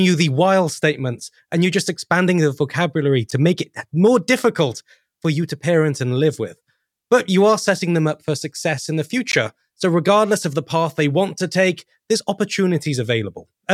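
Short silences cut into the speech at 3.31 s, after "just expanding the vocabulary", and at 9.32 s, after "for success in the" (10.5 ms and 16 ms, six seconds apart). These are gaps at joins of encoded pieces, where the encoder padding was never trimmed.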